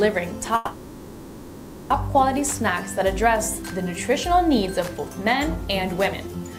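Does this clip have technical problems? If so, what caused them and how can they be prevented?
Yes. From 0.55 s to 1.93 s there is a call audio freeze. The last sound is stretched into a fading buzz-like fill for about 1.35 s rather than dropping to silence. Playback then resumes where it stopped, so nothing appears lost, but everything after is heard about 1.35 s later. This pattern is likely caused by delayed packets draining the jitter buffer. It can be prevented by prioritising call traffic on the network and using an adaptive jitter buffer with more headroom.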